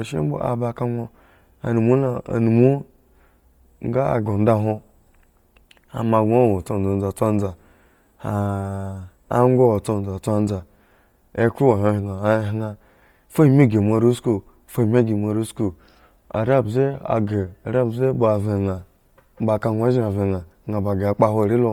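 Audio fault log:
throughout: Bluetooth LC3 compression, heavy. Speech has a breathy, grainy upper band where zeroed spectrum is noise-filled, likely from low-rate LC3, fitting about 32 kbps in 10 ms frames.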